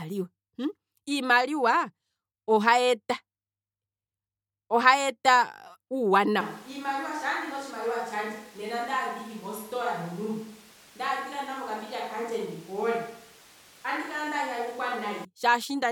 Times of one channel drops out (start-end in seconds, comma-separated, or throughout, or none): none